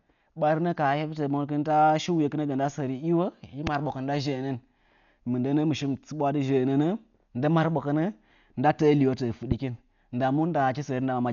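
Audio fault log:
Throughout: Dolby Digital compression, likely at a heavy setting around 48 kbps. Nothing survives above about 6.9 kHz, so the speech sounds dull and muffled, and there's a rough, fluttery noise hanging around voiced sounds where the coder ran out of bits for the fine detail and filled the gaps with noise.
3.67 to 3.69 s and 9.52 to 9.54 s: loud pop, a single sharp click each time, likely a brief voltage spike from a switch, static or a driver glitch. The first jumps about 15 dB over the speech, the second about 10 dB right after "nda təə liwo təə", with the talking carrying on underneath.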